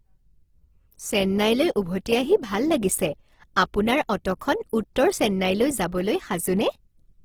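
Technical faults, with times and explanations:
Throughout: Opus compression. The speech sounds grainy and rough, with noise filling thin bands. This is likely Opus music mode at a low bitrate, near 16 kbps.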